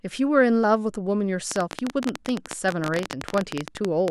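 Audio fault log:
1.52–4.09 s, train of clicks: A rapid run of sharp ticks sits over the speech, about fifty in all at roughly 17 per second. The spacing is uneven, so it sounds like ragged popping rather than a steady buzz. Each click has much the same shape. The loudest stand roughly 15 dB above the speech, so they cut through clearly and carry on in the gaps. The likely cause is electrical interference or a faulty connection or power supply injecting repeated pulses.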